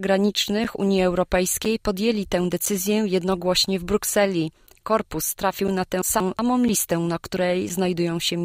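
Gaps between chunks, each about 7 ms, fall at 0.64, 1.65, 2.66, 3.66, 4.67 and 5.68 s, one per second; the waveform shows flat, hard-edged notches and the spectrogram thin vertical blank stripes. From 6.02 to 6.39 s, frames out of order swap two blocks of about 186 ms, making a garbled flutter, seen as abrupt spectral discontinuities. One last chunk gap appears at 6.68 s.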